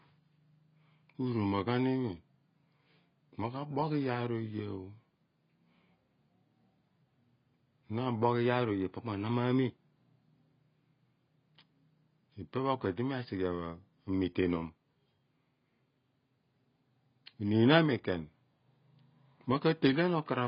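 Throughout, the speech sounds dull and smeared with a fizzy, warbling edge, likely from heavy AAC compression at a low bitrate around 16 kbps; a spectrogram shows nothing above 5.2 kHz. From 8.23 to 9.77 s, the speech runs 5.5% fast and about 92 cents sharp, then snaps back. This is likely a drift correction step, which would show as compressed waveform spacing and harmonics shifted upward.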